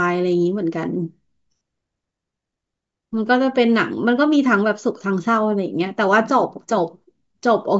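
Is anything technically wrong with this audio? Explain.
No, nothing technically wrong turns up on listening to this speech recording.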